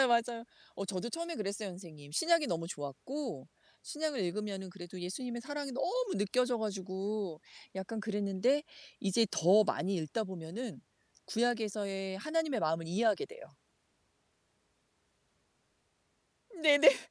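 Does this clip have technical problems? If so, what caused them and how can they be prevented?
No, this clip does not have technical problems.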